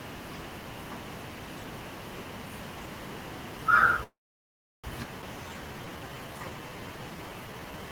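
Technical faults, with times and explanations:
4.03–4.86 s, call audio freeze: the sound stops and a brief fading tail gives way to about 0.71 s of silence, then resumes where it left off with nothing lost. This is likely packets stalling until the jitter buffer emptied. The waveform shows a short decaying smear, then a flat line; the spectrogram has a blank column.
5.22–5.24 s, skip ahead: playback jumps forward almost seamlessly, dropping roughly half a second of audio because later packets were already queued and the stretch in between was discarded. The waveform shows an abrupt join, and on the spectrogram the harmonic contours break discontinuously.
5.37–7.90 s, jitter buffer slow-down: the receiver repeated single pitch periods to rebuild its reserve, adding 409 ms, so the speech runs at 84% speed with unchanged pitch and stretched sounds. The spectrogram shows horizontally elongated formants and harmonics, and the waveform shows repeated near-identical cycles.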